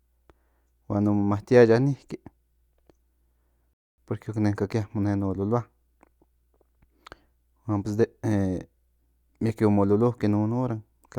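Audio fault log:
3.73–3.98 s, rebuffering stall: the speech drops to silence for 247 ms, then resumes exactly where it stopped with nothing skipped, as the player ran out of downloaded audio and waited for more. The waveform shows a flat gap, the spectrogram an empty vertical band.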